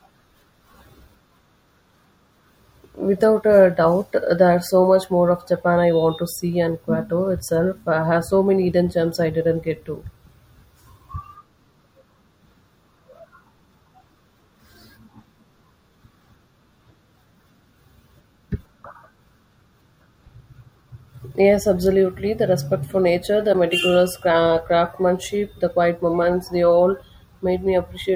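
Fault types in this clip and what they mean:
Corrupt frame decoded, 23.53 to 23.55 s, just after "respect for nature the": a brief, fairly loud glitch cuts across the speech for about 20 ms. Flipped bits in a couple of compressed frames were not caught, so the decoder played them as if they were valid. Misread gains and codes placed energy at the wrong frequencies, producing a glitch that lasts only as long as the damaged frames.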